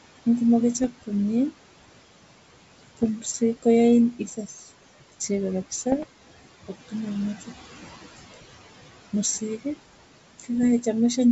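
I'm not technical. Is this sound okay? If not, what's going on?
No, there are three kinds of fault.

Noise suppressor artifacts run through the whole clip. A filter keeps turning down whatever it judges to be steady background noise, so the room noise dips between phrases and comes back underneath the speech.

Bit errors on an ADPCM link cause short pops and rough bursts at 0.79 to 0.86, 2.95 to 3.09, 5.92 to 6.04 and 10.63 to 10.65 seconds. A few corrupted bits upset the phone decoder's running estimates, so each glitch lingers briefly as a crackle and a quick jump in loudness.

Speech cut by the noise suppressor happens between 4.14 and 4.72 seconds. The filter mistook parts of the speech for background noise and lowered them along with it, so about a third of a second of sound comes out swallowed and faint.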